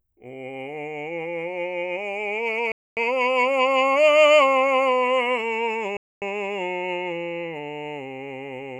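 At 2.72 to 2.97 s and again at 5.97 to 6.22 s the music stops for 250 ms, a gap between chunks inserted after each 3 s chunk. The silence is inserted, not lost material, so unlike a dropout the music resumes exactly where it paused.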